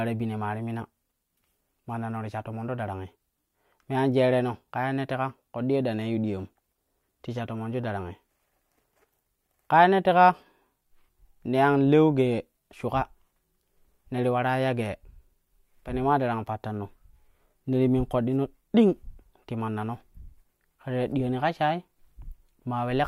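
No technical faults detected.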